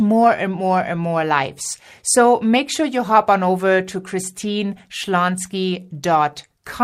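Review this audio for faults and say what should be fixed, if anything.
There's clock drift between sender and receiver running through the whole speech clip. The sender's clock is slow by roughly one and a half percent, so the receiver's jitter buffer keeps running low and has to be topped up to avoid gaps. Fix it by having the receiver resample to the sender's measured clock rate.

That topping-up shows up as repeated timing corrections from 0.36 s to 6.49 s. The receiver keeps repeating short slivers, all stretching the audio, which adds around a tenth of a second overall and plays at about 98% speed. The result is a slightly dragging tempo. Fix it by smoothing the adjustments with gradual time-stretching.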